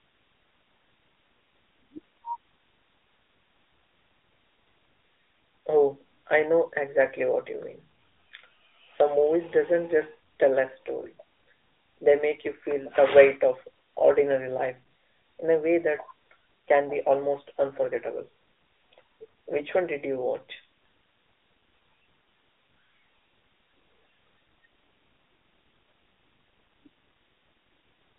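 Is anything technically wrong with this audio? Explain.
Yes. Throughout, the speech sounds thin, buzzy and synthetic, with nothing above 3.8 kHz, typical of the AMR narrowband mobile codec at a rate that fits about 10.2 kbps on a 250 Hz to 3.7 kHz line.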